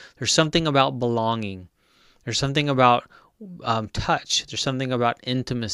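No audible faults anywhere in the speech recording, so there is nothing to flag.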